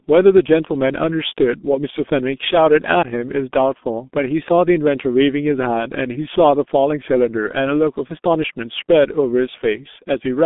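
Throughout the speech, the G.723.1 codec is audible as heavy coding damage. The line band runs only from about 200 Hz to 3.6 kHz, so the speech loses its low body and everything above 3.6 kHz, which muffles it. The codec works on long 30 ms frames and refreshes its voice model slowly, leaving a hoarse, rough texture and smeared consonants. The degree of damage fits a very low bitrate of around 6.3 kbit/s.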